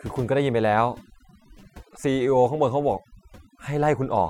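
From start to finish, the background sits at near silence with twinkling specks. This is overdone noise removal: a noise reduction stage set too hard pushes individual frequency bands down whenever they resemble the noise, stripping quieter parts of the speech along with it.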